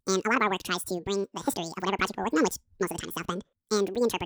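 Speech, played back as audio read two samples at a time (double speed) from start to end: the reader treats each sample pair as one frame, as if the stream were stereo or twice the sample width, so everything runs 2.0 times fast, an octave high.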